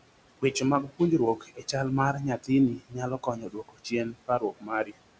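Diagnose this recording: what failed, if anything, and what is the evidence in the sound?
Call processing: noise suppressor artifacts throughout. Background noise drops about 21 dB between words and returns beneath them. Per-frame band gating leaves a residue.

Call processing again: speech cut by the noise suppressor at 0.83–1.0, 1.36–1.74, 2.38–2.5, 2.76–2.98, 3.18–3.92 and 4.11–4.96 s. Quiet speech was judged noise and sinks about 18–21 dB, sounding swallowed.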